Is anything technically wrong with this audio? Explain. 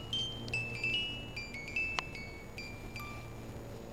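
Yes. Throughout the clip there's a filter restarted on every block: its state gets wiped and each block starts from silence, adding a small transient every time. Those stack into a steady buzz at about 345 Hz, which fits a 128-sample block, rising and falling with the sound's level.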